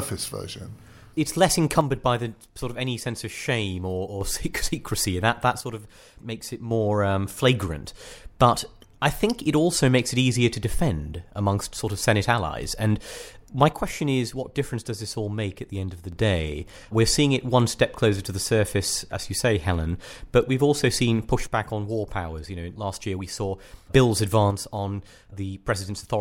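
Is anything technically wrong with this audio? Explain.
Yes. The speech drops abruptly by about 6 dB five times: 1.81–4.21 s, 5.61–6.71 s (just before "um flagrant"), 13.72–16.12 s, 21.47–23.87 s (after "but we've also seen"), and 24.51 s to the end. This is likely one channel dropping out, so the mono sum keeps only half the shared signal. On a waveform the envelope steps down sharply and then back up, except for the last drop, which lasts to the end, and the spectrogram dims evenly across all frequencies.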